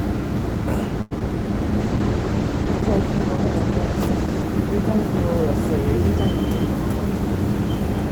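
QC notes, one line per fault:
1.01–1.13 s, short stall from a late packet: a packet arrived late and the jitter buffer ran dry, so the receiver held the last sound for 94 ms until it came in, then resumed from the same point. Nothing is lost, but the sound drags briefly, adding 94 ms of delay.
1.19–1.22 s, short concealed packet loss: about 20 ms of audio never reached the decoder, and the receiver bridged the gap by extending the preceding sound before blending back in. The result is a brief smear or wobble where that fragment should be.
1.82–4.50 s, call bitrate drop: the bandwidth estimate fell and the encoder was pushed from 32 to 13 kbps, sitting at the low rate for about 2.6 s. Coarser coding and a trimmed top end make the sound rougher and duller until the rate recovers.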